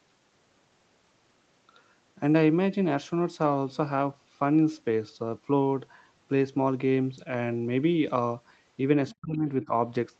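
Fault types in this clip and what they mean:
Speech suppressed in double talk: near the end, both sides were most likely talking at once, and the echo canceller, unable to tell this talker apart from the returning loudspeaker echo, treated the voice as echo and pulled it down. Between 9.2 and 9.72 s the speech sinks in pieces, together adding up to about 0.4 s, with the deepest dip around 30 dB, so parts of the phrase nearly vanish against the band that already stops near 8 kHz.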